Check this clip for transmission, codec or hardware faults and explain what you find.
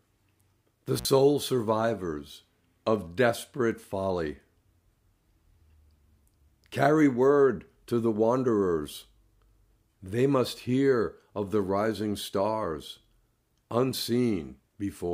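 One hardware fault shows up: an intermittent contact between 0.96 and 1.05 s. For about 58 ms a loose plug or cable connection briefly loses contact, so the signal path opens and the sound drops out, leaving faint hiss, with crackle as the contact breaks and remakes. On the waveform the amplitude collapses to near-flat noise inside that window, bracketed by sharp spikes; the spectrogram shows a short gap with thin vertical broadband streaks at each edge.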